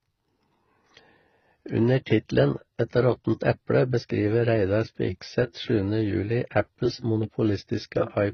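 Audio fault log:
Throughout, transcoding between lossy codecs: the speech is dull, with nothing above 6.3 kHz, and two layers of smeary, warbly artefacts stack up. It's likely a low-rate AAC encode re-encoded to HE-AAC. The second codec wastes bits on the first one's damage.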